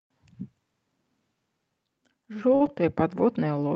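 A short stall from a late packet occurs at 2.55 to 2.62 s in this speech. A packet failed to arrive on time, the jitter buffer ran dry, and the receiver held the last sound for about 51 ms until the packet showed up, then resumed from the same point. No speech is lost, but the playout falls 51 ms behind, and the stretched sound lingers unnaturally with a faint buzz or dip. The Opus call path's band limit near 8 kHz is present throughout.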